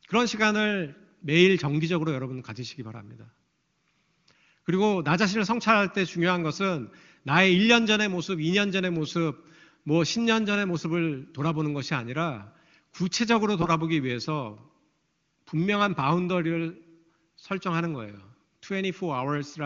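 No technical fault can be heard in this speech recording. It carries the wideband character of the AMR-WB (HD Voice) codec, with a top end that stops near 7 kHz and any coding effects faint at most, which fits the codec's highest mode of 23.85 kbit/s.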